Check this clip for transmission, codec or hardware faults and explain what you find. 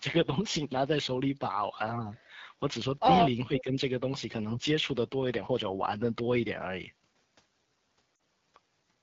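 Three faults can be heard: wideband codec damage throughout, a dip in level consistent with double-talk suppression, and a short frame loss near the end.

AMR wideband (HD Voice) codec, throughout: the speech carries plainly audible coding damage. The codec models the vocal tract and drives it with pulses up to 6.4 kHz, then fills 6.4 to 7 kHz with shaped noise. The roughness and rasp here point to one of its lowest modes, which fits 8.85 kbit/s. At that rate the pulse excitation is too sparse to reproduce the voice cleanly, so it sounds gritty and raspy, with a hissy top band.

Speech suppressed in double talk, 3.46 to 3.77 s: for about a third of a second the speech level drops by about 10 dB and then recovers. The likely cause is an echo canceller that could not tell the near talker from loudspeaker echo while both sides were active, and so attenuated everything. It sounds like the talker briefly moving away from the microphone or being muffled.

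Lost AMR speech frames, at 8.16 s: a 40 ms gap, which fits two lost 20 ms frames. When a frame fails its check, the decoder repeats the last good pitch and vocal-tract settings at falling gain. In wideband mode that decay is quick, so this short loss sounds like a brief smeared warble or dropout rather than a drawn-out tail. The speech resumes weak or rough for a moment.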